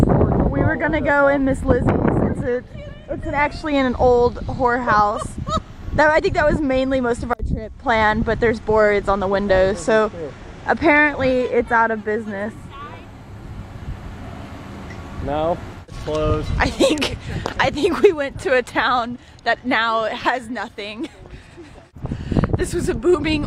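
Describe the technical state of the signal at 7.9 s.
At 7.9 s the signal is intact, with no audible fault.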